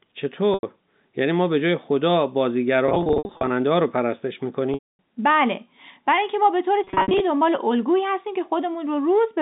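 Packet loss with pitch repetition at 0.54, 2.86–3.50, 4.74–4.99 and 6.84–7.20 s: the last pitch period loops into a held buzz, fading to silence on the longer gaps.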